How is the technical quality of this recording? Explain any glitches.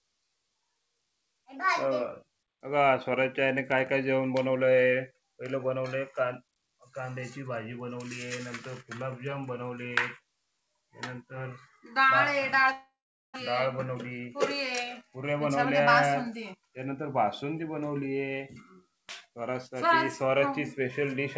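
The recording has two glitches close together, a gap with a fading tail and then a stretch that runs slightly fast. It comes through a call path with nothing above 8 kHz, which fits a wideband call codec such as G.722 at 64 kbps.

From 12.72 to 13.38 s the sound smears into a buzzy, fading continuation of the last moment and then drops to silence for about 430 ms. This is a long network dropout, likely from packets that never arrived. The receiver stretched the final sound to cover the hole, then gave up, and about 400 ms of audio is simply gone when playback resumes.

From 13.51 to 16.94 s the sound runs about 6% fast at unchanged pitch, so it feels slightly hurried. This is a jitter buffer speed-up. After the dropout the buffer held surplus delayed audio, so the receiver repeatedly clipped out tiny pitch-period slices, removing roughly 200 ms to catch up.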